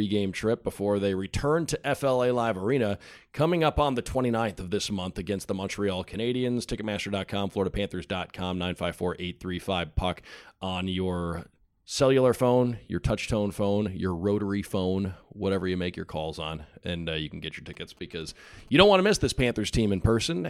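From 17.74 to 18.93 s, GSM signalling bursts break into the speech. A nearby 2G phone is signalling, and the audio circuit rectifies its radio bursts. They sound like a galloping dit-dit-dit of short 217 Hz buzzes, roughly 30 dB below the speech.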